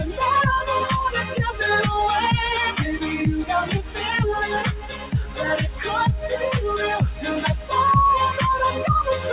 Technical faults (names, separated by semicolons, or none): noise suppressor applied to music or sounds; sound cut by the noise suppressor